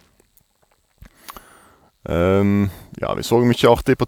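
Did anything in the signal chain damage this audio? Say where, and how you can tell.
No, nothing along the chain seems to have touched this one: the speech just comes through as it is, with no damage anywhere you could point to.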